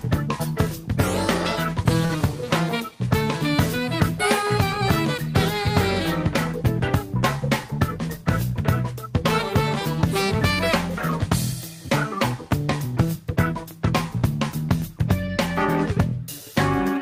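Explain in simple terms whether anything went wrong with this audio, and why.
At about 2.05 to 2.17 seconds there is a short stall from a late packet: one piece of data arrived late, so the player held the last sound for about 42 ms, then resumed exactly where it stopped. Unlike a lost packet, nothing is skipped.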